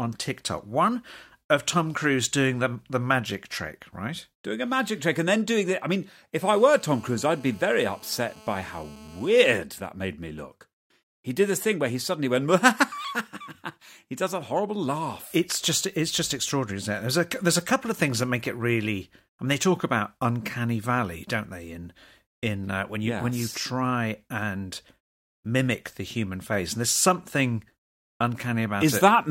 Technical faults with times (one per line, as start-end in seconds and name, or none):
6.42-9.52 GSM phone buzz